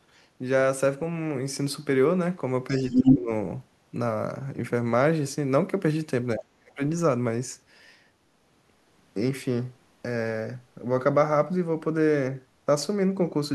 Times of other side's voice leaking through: 2.69-3.17

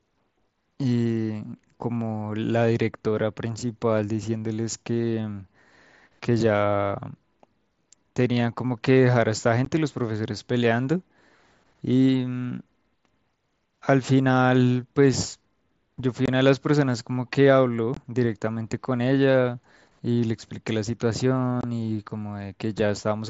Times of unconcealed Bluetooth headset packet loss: 9.65, 16.26-16.28, 17.94-17.97, 21.61-21.64

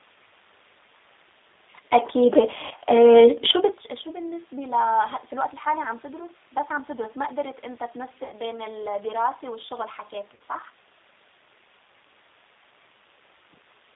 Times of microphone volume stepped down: none

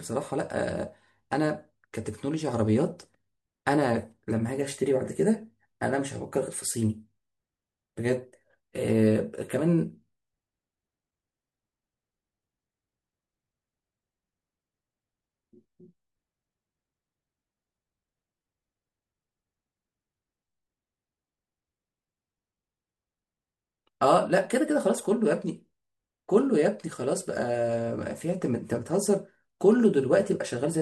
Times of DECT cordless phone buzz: none

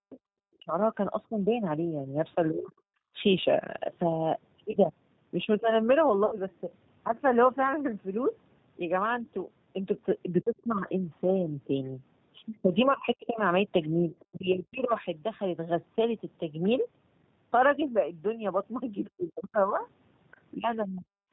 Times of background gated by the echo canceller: 3.00-3.15

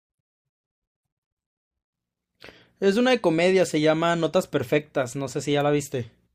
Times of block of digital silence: none

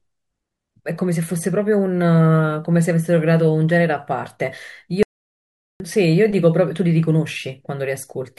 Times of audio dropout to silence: 5.03-5.80

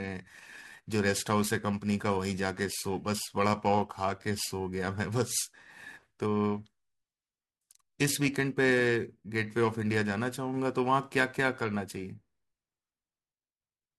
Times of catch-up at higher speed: none

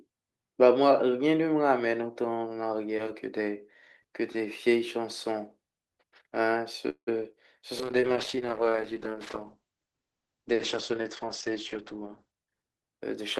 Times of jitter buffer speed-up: 11.80-13.22

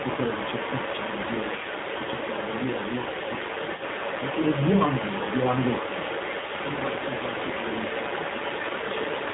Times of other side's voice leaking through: 0.00-9.34

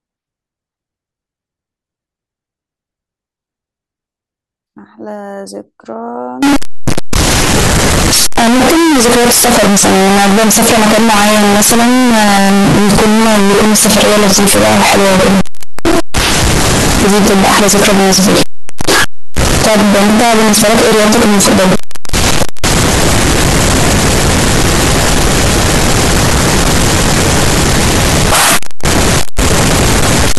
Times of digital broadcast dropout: none

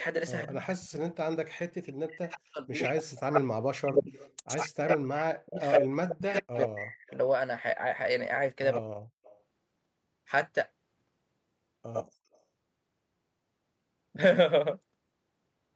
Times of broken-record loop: none

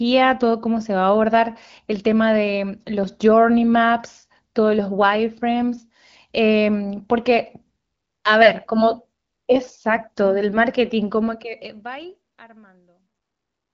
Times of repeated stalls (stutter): none

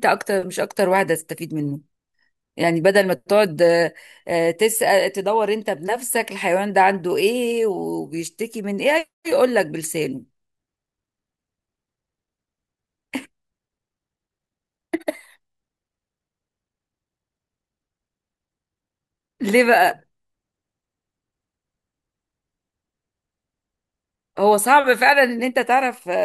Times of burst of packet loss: none

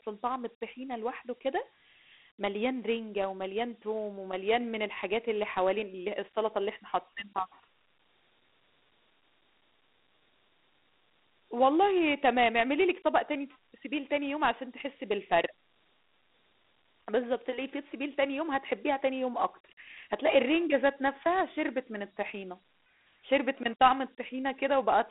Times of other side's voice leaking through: none

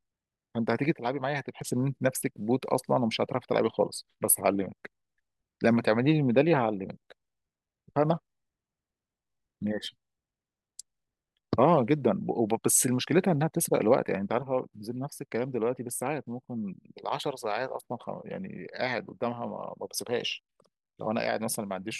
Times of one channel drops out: 0.94-1.61, 14.43-21.99

